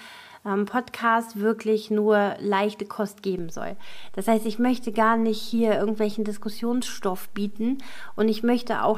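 At about 3.39 s there's a DC step: the waveform's zero line suddenly jumps by about -31 dBFS, the sort of shift you get when a converter recalibrates or an input carrying an offset is switched in. You hear it as a single low thump right at that moment. After that the offset persists through to the end, while the sound itself carries on as before.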